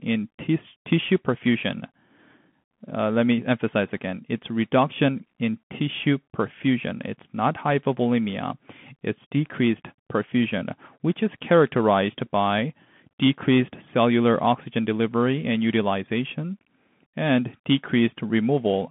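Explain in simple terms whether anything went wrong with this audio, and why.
The whole clip went through a Bluetooth CVSD headset codec, which squeezes speech into a narrow phone-like band. Nothing above about 3.7 kHz survives, so the speech sounds thin and muffled. S sounds turn scratchy, and a grainy hiss sits underneath throughout.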